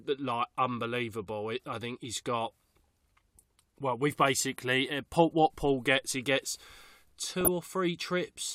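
Speech with DAB burbling at three points: 1.15 to 1.20 s just before "it i think he's", 5.67 to 5.79 s between "basically uh paul what" and "gets he gets", and 7.41 to 7.49 s. Weak reception lets stray bit errors, around a fraction of a percent, through error correction into the MP2 data. Corrupted scale factors make single sub-bands jump in level. A spectrogram shows isolated bright blocks in separate frequency bands, frame-length wide. The longest burst spans several frames.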